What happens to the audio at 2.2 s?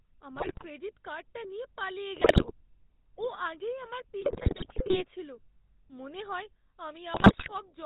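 Just after "কার্ডটা নিয়ে পালিয়ে", from 2.16 to 2.52 s, the speech is hit by GSM bit errors. Corrupted bits reach the decoder, so the filter, pitch and gain values it rebuilds are wrong for frame after frame. The voice breaks into squawks, pops and gargling. On a spectrogram the band smears and jumps from one 20 ms block to the next. On the waveform there are sudden level spikes and distorted, misshapen cycles.

Through that moment the whole clip also carries the GSM full-rate codec, which fits a 13 kbps bitrate. The vocal tract is modelled and driven by sparse, regularly spaced excitation pulses, so the voice sounds plainly buzzy and gravelly. On a spectrogram nothing shows above 4 kHz, and the harmonics look coarse and grainy. The waveform looks roughened rather than smooth, with the rough texture running steadily through the clip.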